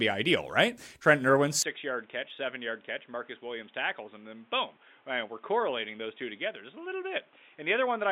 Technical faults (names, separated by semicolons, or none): input switched to a poorer device